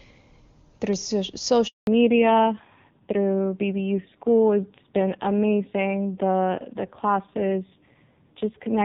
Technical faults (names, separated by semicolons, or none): handover gap; fallback to narrowband